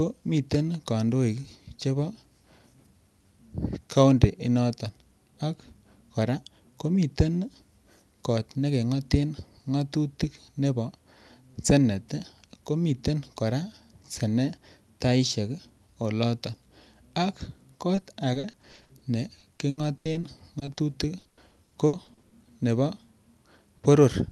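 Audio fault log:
17.95–19.03 s, 19.39–20.79 s, 21.19–22.33 s: repeated packet loss (robotic sound), with frequent short dropouts of up to 80 ms papered over by stretching the last sound, so 22 to 30% of each stretch turns choppy.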